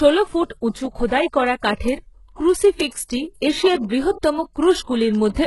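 Throughout the speech the treble is rebuilt rather than real. Nothing reaches above 11.5 kHz, and s sounds come out gritty and metallic with heavy codec damage. This is likely HE-AAC compression at a very low rate, around 12 kbps, with spectral band replication copying lower bands upward.

From 0.19 s to 5.41 s, word clock ticks recur roughly every 0.15 s, around forty in all. Each is a sharp tick where one sample is dropped or repeated as an unlocked receiving clock slips past the sender's, pointing to a mismatch of roughly 200 ppm.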